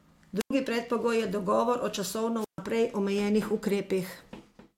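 At 0.39 s and again at 2.40 s the speech suffers a wireless microphone squelch dropout. The transmitter's FM signal fades at the receiver, hiss swells briefly, and the squelch then cuts the output to near silence. The first hole spans 0.39 to 0.51 s with about 92 ms fully muted. The second runs 2.40 to 2.59 s, muting for about 138 ms, before the speech returns.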